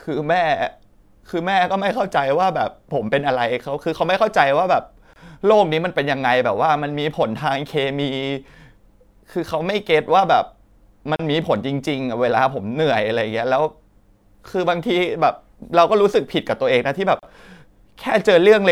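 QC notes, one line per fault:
5.13–5.16 s, 11.16–11.19 s, 17.19–17.23 s: gap at a join of encoded pieces. Silences of 26, 34 and 34 ms recur every 6.0 s where separately encoded pieces meet with their start delay and end padding untrimmed. Unlike a dropout, nothing is lost, and speech resumes exactly where it stopped.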